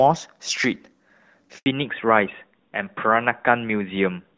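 A handover gap runs from 1.58 to 1.66 s: the speech fades out within a few tens of milliseconds and the line goes completely silent for about 80 ms. This is the sound of the call being passed from one network link to another, with no speech frames delivered while the switch happens, so whatever was said in that brief window never reaches the listener and is simply missing rather than garbled.

A fallback to narrowband follows at 1.66 s and lasts to the end of the clip. Before the gap the speech carries the airy upper detail of HD Voice, with only light coding roughness that fits AMR-WB at around 12.65 kbit/s. After it, nothing above 4 kHz survives. Sibilants lose their crispness and the voice turns duller and rougher, consistent with the call having dropped to the older AMR-NB codec at about 12.2 kbit/s.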